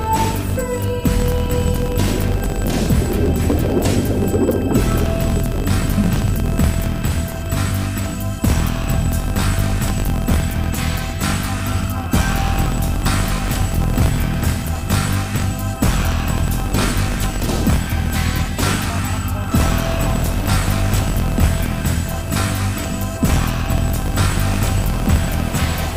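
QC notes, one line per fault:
Throughout: filter restarted on every block. The filter loses its internal state at each block boundary and begins from silence, so every block opens with a small transient. These ticks repeat at 50 Hz, which fits blocks of about 20 ms, and merge into a buzz whose loudness rises and falls with the sound's level. On a spectrogram this shows as a harmonic comb at 50 Hz multiples. On the waveform it shows as evenly spaced discontinuities every 20 ms.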